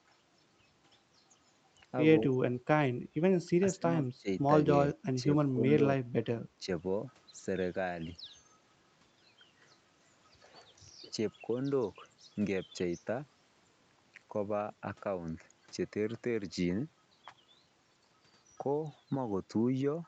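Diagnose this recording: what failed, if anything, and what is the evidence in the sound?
Call processing stage: speech suppressed in double talk, likely from the echo canceller ducking the talker while the far end spoke. The speech sinks by about 15 to 20 dB at 2.23–2.43, 3.1–3.16, 3.46–3.85, 4.17–4.28 and 5.51–5.63 s.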